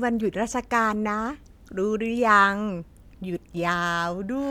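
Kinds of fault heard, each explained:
No kind of fault is heard in this clip.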